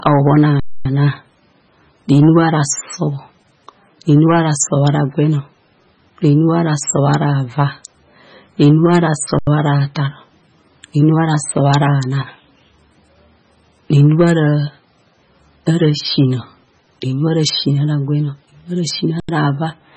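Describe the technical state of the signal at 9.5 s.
Just before 9.5 s, from 9.39 to 9.47 s, there is an underrun with held sample. The output buffer ran dry for about 85 ms, which fits a 4096-sample buffer, and the converter froze on its last value. The waveform sits flat, so the speech simply stops rather than clicking out. Nothing was skipped during the gap, so playback picks up where it left off, with only a soft join.

Hard clipping is present here as well. Peaks are driven about 8 dB past the ceiling, and about 0.7 percent of samples are cut flat. The squared-off tops add high harmonics, so the loudest parts of the speech carry a brief crackle rather than a continuous fuzz, since so few samples are affected.

The band also ends sharply at 9 kHz. Weak spectral detail flickers in and out between frames, giving a watery, swirling texture with chirpy sibilants and softened onsets. This is likely MP3 compression at a very low bitrate, heavy enough that the encoder has dropped everything above the cutoff.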